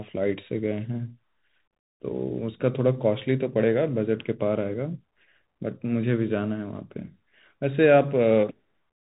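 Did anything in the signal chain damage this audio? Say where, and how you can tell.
Yes. The damage sits at the codec stage: a Bluetooth CVSD headset codec, which fits a 64 kbit/s link, runs throughout. Its one-bit delta steps lag fast, loud high content, so the speech carries granular hiss, scratchy s sounds, and nothing above 3.8 kHz.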